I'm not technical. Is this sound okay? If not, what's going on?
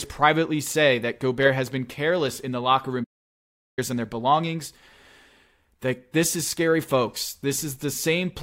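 No. After "in the locker room", the speech goes silent from 3.03 to 3.79 s: a playback stall, likely the player running out of data.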